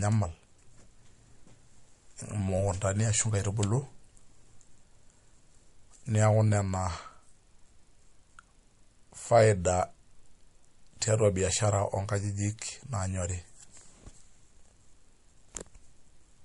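From start to finish the speech sounds dull above 11.2 kHz and carries a doubled, smeared graininess, two kinds of compression artefact layered together. This likely comes from transcoding between lossy codecs, which fits a low-rate MP3 later re-encoded as WMA, keeping the MP3's cut-off.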